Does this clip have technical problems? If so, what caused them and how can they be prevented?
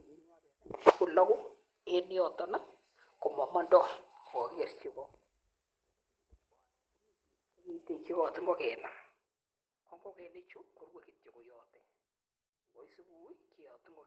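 Yes. The clip has three events of lost packet rebuilt from error correction, at 4.31 s, from 7.79 to 7.81 s, and from 10.51 to 10.57 s. The first two are 20 ms rebuilds. The third lasts 40 ms, which points to two separate packets. In each case the decoder filled the gap with the low-bitrate copy carried in the following Opus packet, so the speech never drops out. Instead, those short stretches sound rougher and noisier than the surrounding call-codec audio. To prevent this, reduce packet loss on the network path, for example with a wired connection or less congestion.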